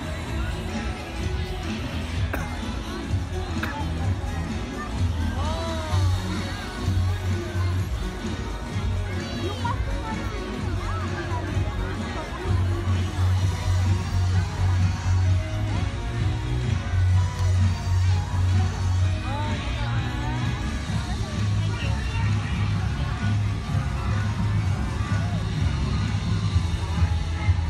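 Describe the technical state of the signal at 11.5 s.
Nothing is wrong with the signal at 11.5 s; the audio there is intact, with no dropout, distortion or other fault to be heard.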